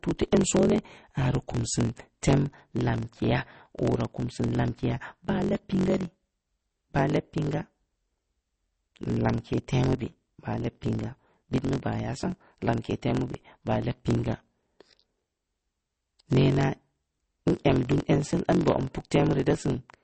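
Right from the start and running the whole way through, there's a block size mismatch (truncated) going on. One stage writes its audio in blocks and the next stage reads shorter ones, so the tail of every block gets chopped off. You hear that as a steady buzz at about 45.9 Hz, which fits 1024-sample blocks being written, and the speech runs about 1.07 times fast because of the missing bits, though the timbre itself holds up.

On top of that, across the full clip, the audio has plainly audible codec damage, and there's nothing at all above 8.3 kHz, so the top end just stops. The likely cause is MP3 compression at a bitrate around 32 kbps. With that few bits, the encoder throws away the weaker frequency lines, which flicker in and out from frame to frame, and it trims off everything past a fixed treble cutoff. That's the band limit you hear here.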